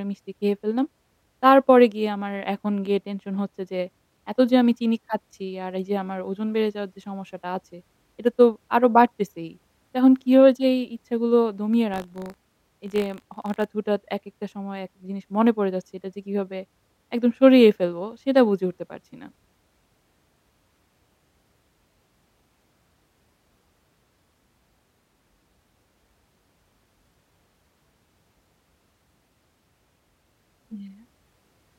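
From 11.92 to 13.65 s the speech carries buffer tearing: writer and reader of the ring buffer have slipped, so a tiny sliver of each 20 ms period holds audio roughly 40 ms stale. That gives a rattling 50 Hz buzz, seen as regular waveform discontinuities and vertical spectrogram lines.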